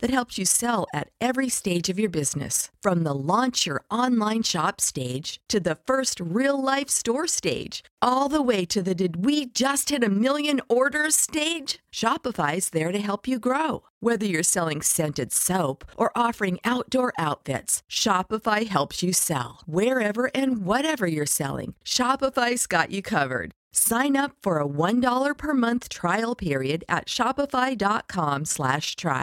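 Throughout, the speech carries a rough, fast flutter, its level pulsing by about 6 dB around twenty times a second. This is overlap-add ripple: the audio was rebuilt from windowed frames whose overlaps don't sum to a constant gain, so loudness swells once per frame.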